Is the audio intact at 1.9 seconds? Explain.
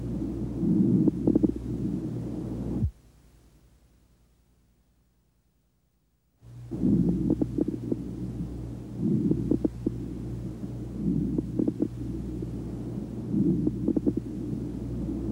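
Yes, the audio at 1.9 s is intact, with no dropout, click, distortion or other fault at that moment.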